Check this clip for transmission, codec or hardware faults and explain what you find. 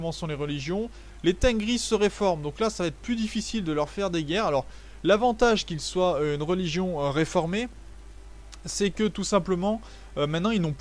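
Nothing here sounds off to me; the audio runs steady the whole way, with no dropouts, glitches or damage to point to.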